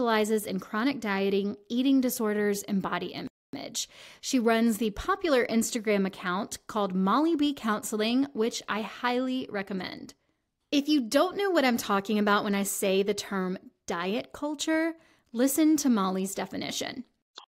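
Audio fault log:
3.27–3.53 s, playback stall: the speech cuts off mid-flow for about 0.26 s of dead silence, then resumes, likely because the player ran short of data or was briefly blocked. The waveform shows a flat gap, and the spectrogram shows a blank vertical band across all frequencies.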